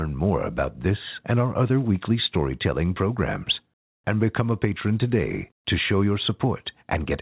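No technical faults can be heard anywhere in the speech. It has come through a WebRTC call path, with nothing above 4 kHz and the usual coding noise of a telephone codec, which fits G.711 mu-law at 64 kbps.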